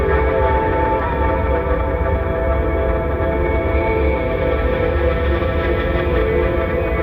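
Nothing here to flag: the audio runs along steadily from the first moment to the last, with no audible technical faults anywhere in it.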